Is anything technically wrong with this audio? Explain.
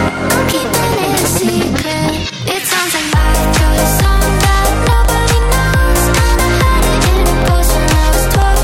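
Yes. Periodic USB or driver dropouts run from 0.17 to 8.54 s: every 0.125 s, a stalled bus or driver blanks about half a millisecond to silence, giving regular ticks.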